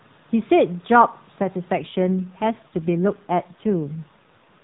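At 1.78 s an AMR rate drop sets in and lasts to the end. The speech turns rougher and more synthetic, which fits the narrowband mobile codec stepping down from 12.2 to 5.9 kbps. The band stays the same. There is no gap.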